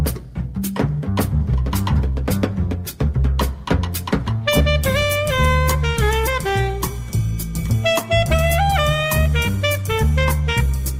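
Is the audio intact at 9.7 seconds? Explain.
Yes, at 9.7 seconds the audio is intact, with no dropout, click, distortion or other fault present at that moment.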